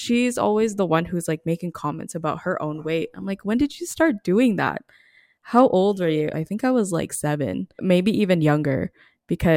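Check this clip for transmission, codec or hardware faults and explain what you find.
No transmission, codec or hardware faults can be heard in the speech. Nothing in the audio calls for further explanation.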